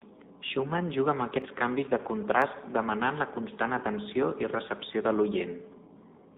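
From the first moment to the end, the speech carries the sound of the AMR narrowband mobile codec. Everything sits inside a telephone band of roughly 200 Hz to 3.7 kHz, so a spectrogram shows a hard ceiling with nothing above it and a thin floor below. The vocal-tract model, fed only a few pulses per frame, makes the voice plainly buzzy and synthetic, which fits a low AMR-NB mode around 7.4 kbps.

At 1.42 s, between "juga amb" and "canvis de", a single sharp click cuts through. At 2.42 s, between "canvis de" and "demanant la constant atenció", the same click returns. Each is most likely a case of dropped samples, a tiny fraction of a millisecond missing from the stream. The waveform jumps abruptly from one value to a later one, and the spectrogram shows a thin vertical line spanning the band at each point.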